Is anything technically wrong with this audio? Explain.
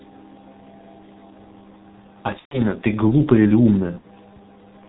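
Yes. The whole clip is heavily damaged by the G.723.1 codec, and two stretches show VoIP packet loss concealed by the speech codec.

The G.723.1 coding is present throughout. The sound has no content above 4 kHz and a muffled, hoarse quality, and consonants are smeared. The level of damage fits a rate near 6.3 kbit/s. The codec models the voice in 30 ms frames and updates that model slowly, so fast changes blur. A simple low-pass filter would not do this: it would dull the sound but keep it clean, whereas here the texture itself is rough and grainy.

Packet loss concealment occurs at 2.39 to 2.61 s and again at 3.98 to 4.06 s. About 120 ms of audio is missing in the first stretch, which fits four 30 ms frames, and about 60 ms in the second, which fits two. Instead of a gap, the decoder extrapolated from its last pitch and filter settings and turned down the gain with each frame, so the sound stretches into a fading buzzy tone or coloured noise, and in the first stretch it is muted from the third lost frame. 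A plain dropout would leave silence or a click. Here the sound is stretched rather than simply cut, and the following audio takes a moment to regain its normal strength.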